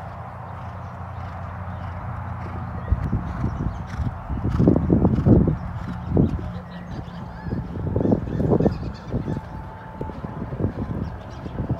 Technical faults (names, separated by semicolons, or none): damaged data in a compressed stream